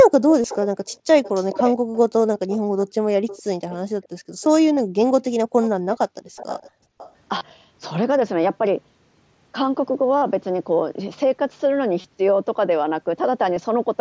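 From 0.3 to 2.57 s a faint second copy of the speech trails the original by 423 ms, at about 10 dB below it. This is an echo leak, likely from a far-end loudspeaker whose echo canceller let part of the signal back. On a spectrogram, the harmonic patterns repeat, fainter, 423 ms later. The same delay returns at 3.27 to 4.47 s at about 20 dB down, and at 5.62 to 7.11 s at about 15 dB down.

Concealed Bluetooth headset packet loss first appears at 0.42 to 0.44 s. The gap fits a few lost headset frames, and the receiver filled it by repeating the closest-matching recent waveform. The result is a brief buzzy sameness. The waveform shows a short periodic stretch, and the spectrogram shows frozen, smeared harmonics.

At 1.8 to 1.91 s the background is gated by the echo canceller. The canceller clamped the microphone, so the room sound drops by up to about 40 dB for about a tenth of a second. The noise floor falls to near silence in both the waveform and the spectrogram.

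A second, shorter loss occurs at 4.76 s. The gating returns from 6.08 to 6.98 s and removes the background for about half a second in total. Further concealed losses fall at 7.38 to 7.41 s, 10.18 to 10.22 s, 12.01 to 12.04 s and 13.55 s. The 10.18 s one is the longest, at 45 ms. Throughout the clip the spectrogram stops near 8 kHz, which matches the wideband headset link.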